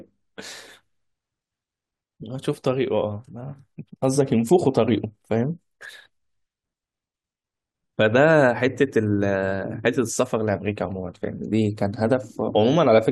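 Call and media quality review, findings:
Short glitch at 12.49 s. Damaged data in the compressed stream at the decoder input. Corrupted bytes make frames unreadable; the decoder loses sync and resumes at the next valid frame header.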